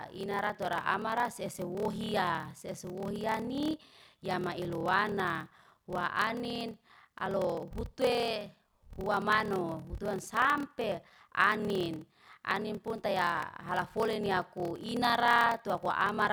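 Speech with a block size mismatch (padded) throughout: a 38.3 Hz buzz and playback slowed to 0.889x at normal pitch, which fits 1024-sample blocks zero-filled into longer reads.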